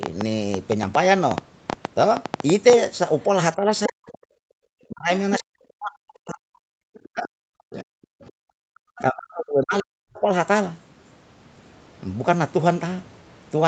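From 0.03 to 2.74 s a train of clicks ticks over the sound, about twenty sharp pops at an uneven pace averaging 6.7 per second and standing well above the audio. The likely cause is interference or a faulty connection or power supply. A waveform shows thin spikes; a spectrogram shows narrow full-height vertical lines.

Speech suppressed in double talk first appears from 3.55 to 4.12 s, then from 4.86 to 6.68 s, 7.12 to 7.91 s and 8.49 to 10.29 s. The voice dips by up to roughly 40 dB or breaks into fragments, likely because the echo canceller turned everything down while both sides talked. The waveform envelope collapses in chunks, and the spectrogram loses energy in patches, the upper band first.

The other side's voice leaking through is heard from 4.12 to 4.17 s and 6.94 to 7.07 s as faint scraps, far below the talker. It is likely residual loudspeaker echo that the canceller missed, and it shows as weak, smeared traces on the spectrogram.

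Background gated by the echo canceller hits from 4.4 to 4.58 s. For about 200 ms the room tone drops by about 38 dB and then returns. On a spectrogram the noise floor shows a dark vertical gap, and the waveform flattens to near silence there.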